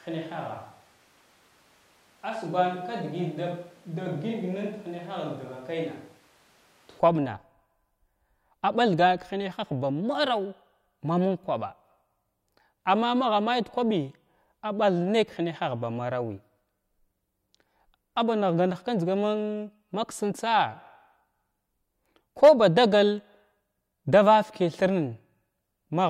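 A speech clip. From the start to 7.00 s it sounds like a switch to a distant microphone, likely a far-off one. The voice is roomy, thin, about 5 dB quieter, and noisier.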